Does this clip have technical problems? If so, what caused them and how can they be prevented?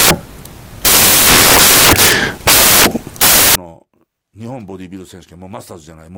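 Yes. Samples built from the wrong bytes run from 0.00 to 3.55 s: mis-assembled bytes push the fast-changing low bits into the high part of each value, turning the speech into broadband noise. To prevent it, make the reader's byte order, offset and sample alignment match the format the audio was actually written in.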